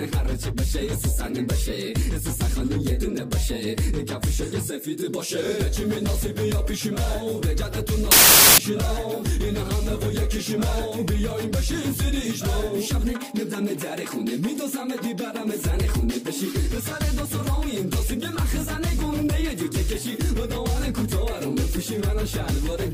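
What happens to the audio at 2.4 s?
Nothing goes wrong at 2.4 s; the audio plays through that moment intact, with no dropout, click, or other fault.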